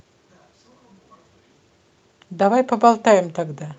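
The speech carries no audible technical faults, and it comes through a call path whose Opus coding limits the audio band to about 8 kHz.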